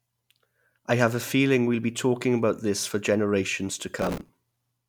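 Processor overload crackle, 3.99 to 4.29 s: dozens of few-millisecond buffers miss their deadlines and repeat old audio, tearing grittily across the speech.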